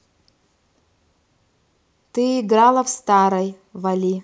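No technical faults can be heard in this recording.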